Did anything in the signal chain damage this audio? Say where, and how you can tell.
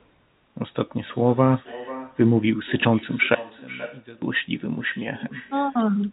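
Yes. In call processing, this is echo with no canceller. The far end's loudspeaker leaks into its microphone and nothing subtracts it, so throughout the clip each phrase is trailed, about half a second later, by a thinner copy roughly 17 dB below the speech.

From 3.35 to 4.22 s the level falls by about 22 dB and the speech shrinks to a faint residue. The likely cause is one channel inverted in the wiring or playback stage, so the mono sum cancels the centred voice.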